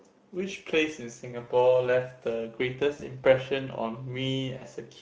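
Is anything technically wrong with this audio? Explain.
Yes, two things. Throughout, there's plainly audible Speex codec damage. The CELP coder is short on bits for the excitation, so the speech sounds hoarse and grainy, with a noisy edge. The degree of damage points to a middle setting somewhere around 17 kbps.

There's also VoIP packet loss concealed by the speech codec, at 1.43–1.51 s, 2.93–3.02 s and 4.57–4.63 s, covering roughly 40, 60 and 40 ms of lost audio. The decoder keeps extrapolating its last pitch and filter while turning the gain down, so each gap becomes a short, fading smear of buzz or coloured noise. The voice stays weak or distorted just after each one.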